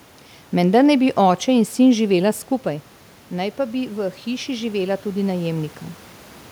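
Around 2.5 s the talker moves back and the speech level at the microphone drops by about 9 dB. Automatic gain rising follows from 2.63 to 5.78 s, lifting voice and room noise together by about 5 dB. The waveform envelope and the spectrogram noise floor climb slowly across that span.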